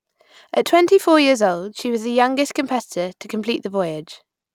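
Speech recording; no technical faults detected.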